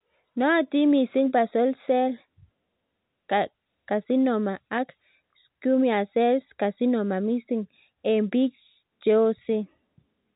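Nothing faulty can be heard in this speech recording.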